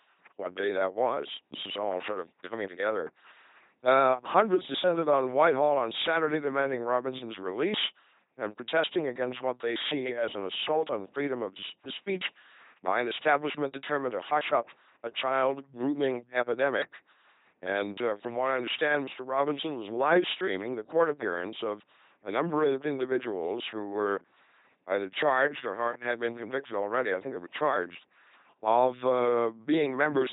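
Passed through an LPC-10 vocoder throughout, at a rate that fits 2.4 kbit/s, this speech is rebuilt as a buzzing pulse train or hiss through a ten-pole filter, heavily damaged, robotic and mechanical, with nothing above 3.9 kHz.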